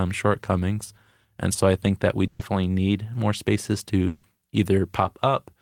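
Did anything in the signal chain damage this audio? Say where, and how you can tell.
Yes. At 2.27 to 2.42 s the speech freezes into a fading buzz or hiss, then skips ahead. This is a burst of packet loss on the network, with 120 ms concealed.

From 4.07 to 4.26 s the sound again holds as a fading buzz or hiss and resumes later, likely a long network dropout with 160 ms concealed.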